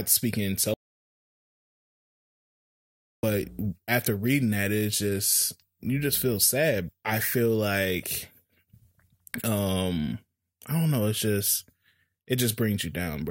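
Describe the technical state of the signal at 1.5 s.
An audio dropout to silence covers 0.74 to 3.23 s: the input was likely lost while recording continued, leaving about 2.5 s of silence without room tone.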